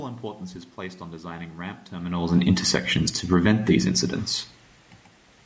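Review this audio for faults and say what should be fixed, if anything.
Automatic gain falling from 2.55 to 3.53 s, after "designing ramp terminals and": the gain control lowers the level about 4 dB, so the waveform envelope tapers and the spectrogram dims, background included. Prevent it by lowering the microphone input level so the gain control never has to pull back.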